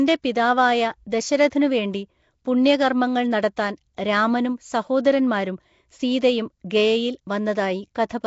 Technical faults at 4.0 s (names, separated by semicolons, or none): Nellymoser compression; pre-echo